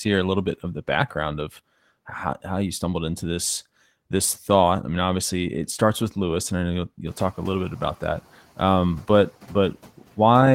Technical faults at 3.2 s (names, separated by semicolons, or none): none